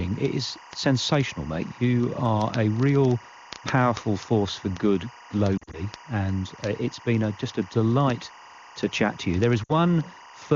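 Linear timecode from a neighbouring track or cable has leaked into the audio for the whole clip. Its square wave flips between tones near 1 and 2 kHz at a pace that fits 24 fps code, so a steady chirping warble sits about 25 dB beneath the speech throughout.

From 5.58 to 5.77 s, radio errors corrupted AMR speech frames, and the decoder filled the gaps by repeating its last good settings at falling gain. About 100 ms of lost frames, scattered over 160 ms with the longest gap 40 ms, make the speech stutter and warble briefly. At 9.63 to 9.72 s, a further 60 ms of lost AMR speech frames dips the speech again before it returns weak or rough for a moment. Between these dropouts the 23.85 kbit/s AMR-WB wideband coding itself adds no more than faint damage.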